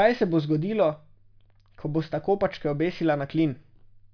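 No technical faults can be heard anywhere in the speech.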